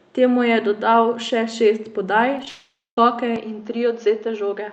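Short speech recording carried over an Opus call path, with three distinct faults. Right after "dodal še šest podaj", brief smears land at 2.38, 2.43 and 2.45 s. This is short concealed packet loss: each time about 10 ms of audio arrived too late, and the decoder patched the hole by extending the preceding sound before blending back. From 2.48 to 2.98 s the sound turns into a fading buzz that dies into about 0.22 s of silence before the speech resumes with that half-second missing. The likely cause is a long network dropout, where the receiver's concealment ran out of material to extend. From 3.36 s to the end the sound abruptly becomes duller and boxier, with nothing above 6.7 kHz and a faint new background noise far below the speech. There is no gap and no level jump. The likely cause is the input switching to a poorer device.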